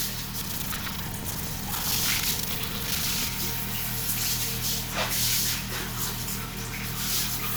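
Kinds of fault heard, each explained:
Buffer tearing: the software filling the ring buffer and the hardware reading it have drifted out of step, so their positions cross inside every period and part of each period replays audio from the previous lap. From 0.4 to 3.29 s this puts a rattling, robotic 25 Hz buzz over the sound, with hard joins in every 40 ms period and roughly a third of each period holding audio about a tenth of a second old.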